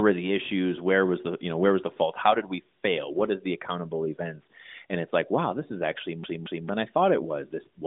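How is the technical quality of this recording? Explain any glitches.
The recording has one clear glitch near the end, heard through a narrowband mobile line with nothing above about 3.7 kHz and light codec colouring consistent with AMR-NB's top 12.2 kbps mode.

A CD stuck on one turn appears from 6.24 to 6.69 s: the player jumps back each revolution, so a 225 ms slice repeats twice, each restart marked by a brief mute.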